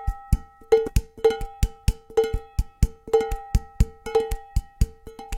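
At 0.87 s a stretch of audio was dropped while later material was already queued, a skip ahead. About 0.4 s of sound never plays, and the delay through the system drops by the same amount. Because nothing fills the break, the audio on either side is joined almost directly, so the listener hears an abrupt jump forward rather than a silence, as if part of the sound had been snipped out.

From 1.00 s to 3.54 s the jitter buffer was holding more audio than its target, so the receiver trimmed it back with a jitter buffer speed-up. It repeatedly removed short pieces lasting one or a few pitch periods, taking out around a fifth of a second in total. Playback runs at about 109% of normal speed while the pitch stays the same, and the sound comes across as rushed and compressed in time.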